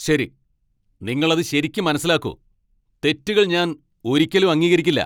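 No technical faults can be heard anywhere in this speech.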